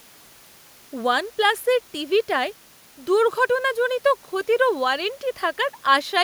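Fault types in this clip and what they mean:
No technical faults can be heard in the speech recording, whose signal path shows no audible disturbance at any point.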